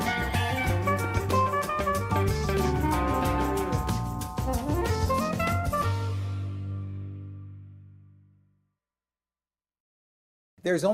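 Nothing goes wrong anywhere in the clip; there's no technical fault to point to at any moment.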